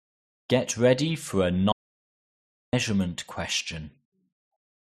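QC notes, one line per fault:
1.72–2.73 s, audio dropout to silence: the speech cuts off mid-flow and returns about one second later. The gap is silent, with no room tone. The likely cause is a lost input while the recorder kept writing silence. That second of speech is gone.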